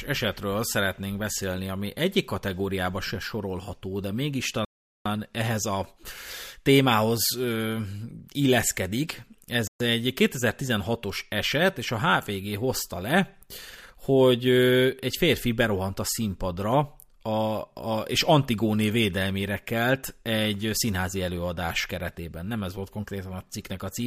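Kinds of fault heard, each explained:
Bluetooth stall: The speech cuts abruptly to full silence twice and then carries on. The first gap runs from 4.65 to 5.06 s, about 0.41 s of dead air. The second is shorter, from 9.67 to 9.81 s, about 0.13 s. The likely cause is radio interference delaying the wireless link, so the headphones' buffer emptied. Playback then had to wait until the resent audio arrived.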